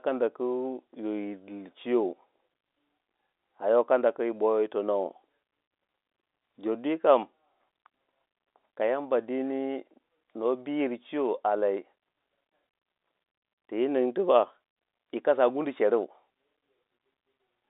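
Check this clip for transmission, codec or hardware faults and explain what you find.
No faults detected.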